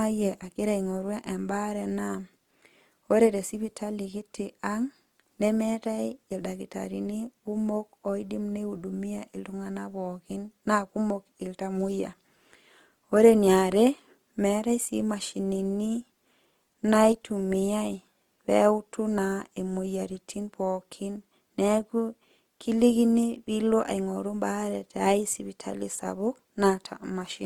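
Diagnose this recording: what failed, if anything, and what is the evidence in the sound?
The codec stage is at fault: Opus compression is audible across the whole speech clip. The sound is rough and grainy rather than swirly, with a noisy texture where steady tones should be, and no obvious spectral holes. Bandwidth stays full, reaching about 20.1 kHz. That points to Opus in its CELT music mode at a low rate, likely around 24 kbps, filling starved bands with folded or noise content instead of leaving them empty.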